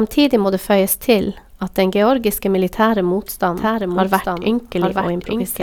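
At 3.56 s a doubled audio track begins and runs to the end: a second full-band copy of the speech trails about a second behind, roughly 5 dB quieter, dry and without room decay, switching in abruptly. A likely cause is a slower second capture path mixed back in.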